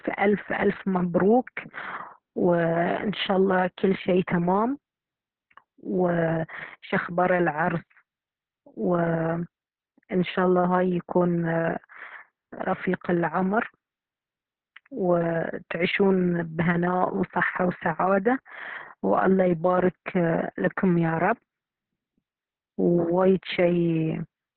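Heavy Opus voice compression runs the whole clip: SILK at a bitrate around 6 kbps, narrowband, leaving nothing above 4.4 kHz, so speech sounds muffled, hoarse and faintly robotic.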